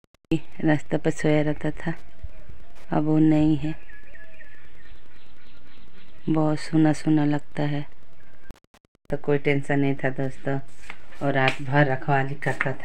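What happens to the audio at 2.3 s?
Wi-Fi interference is present at 2.3 s, as it is throughout the clip. A nearby Wi-Fi radio's beacon, sent every 102.4 ms, is rectified by the audio circuit, producing a faint, steady ticking about ten times a second, well below the main sound.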